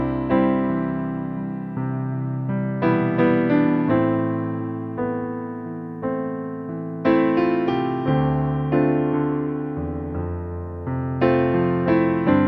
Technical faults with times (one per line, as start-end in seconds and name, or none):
none